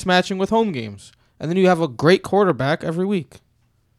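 A loud pop at 2.50 to 2.52 s, just after "you have a great", likely from a voltage spike entering the chain, sits a few dB above the speech, which continues beneath it.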